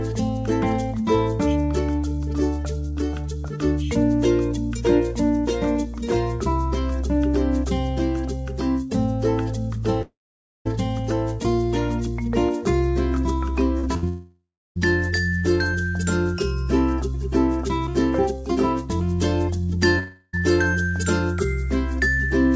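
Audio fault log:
10.02–10.67 s, 14.08–14.79 s, 19.99–20.35 s: long network dropout. Each time, audio likely stopped arriving for about 0.64 s, 0.68 s and 0.34 s. The receiver extends the last sound as a fading buzz or hiss, leaving silence of roughly 0.53 s, 0.32 s and 0.02 s before playback resumes further on with the lost span gone.
13.79–13.85 s: short concealed packet loss. About 40 ms never reached the decoder in time. The receiver bridged it by extrapolating the preceding sound and crossfading back, which is heard as a brief smear or wobble.
13.97–14.04 s: burst of packet loss. Roughly 60 ms of consecutive data was lost. The receiver extended the last sound and attenuated it across the gap, giving a short held buzz or fading hiss before the audio picks up past the missing portion.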